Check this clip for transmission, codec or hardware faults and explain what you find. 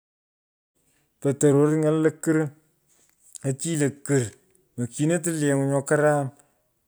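No transmission, codec or hardware fault can be heard in this speech recording. The only level change is a smooth fade-in at the start, rising gently from around half a second and reaching full level at 0.77 s, with no click or hard edge, just as an editor would shape it.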